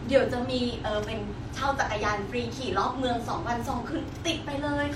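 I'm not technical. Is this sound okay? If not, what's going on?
Yes, it sounds fine.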